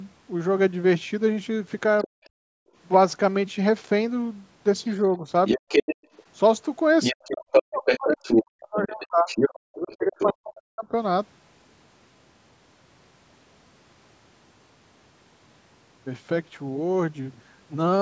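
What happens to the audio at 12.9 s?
Nothing goes wrong at 12.9 s; the speech carries on intact, with only the normal call microphone processing in the chain, whose high-pass filter trims the lowest bass and whose band tops out at 8 kHz.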